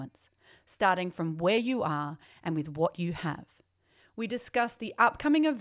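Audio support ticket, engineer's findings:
No audible faults found in the speech clip; nothing to attribute to any component on the capture, transport or playback path.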